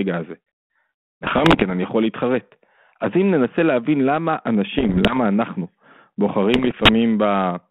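Bit errors on an ADPCM link hit at 1.23–1.64 s, 4.78–5.18 s and 6.54–6.90 s. Each flipped bit knocks the decoder's step size and predictor off, giving pops and rough, level-jumping bursts.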